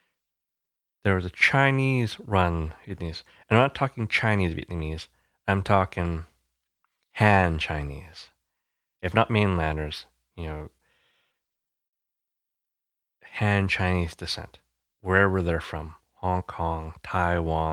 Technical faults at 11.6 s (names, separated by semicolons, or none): repeated stalls (stutter)